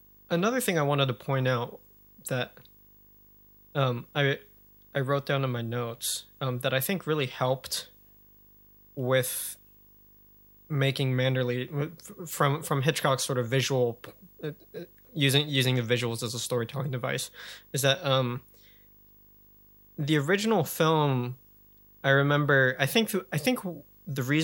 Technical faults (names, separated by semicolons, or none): video or display buzz